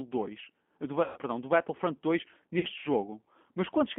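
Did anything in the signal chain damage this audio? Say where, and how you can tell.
Yes, at the codec stage. The whole clip has the rough, slightly synthetic texture of G.729 voice coding, squeezed into a 200 Hz to 3.4 kHz telephone band. That points to an 8 kbit/s codec rebuilding the speech from a filter, a pitch predictor and sparse pulses.

There's also damage on the network side: VoIP packet loss concealed by the speech codec. From 1.04 to 1.18 s and again from 2.59 to 2.67 s the sound smears into a buzzy tone or coloured noise that fades. That's the decoder extrapolating from its last pitch and filter to cover gaps of about 120 ms and 40 ms.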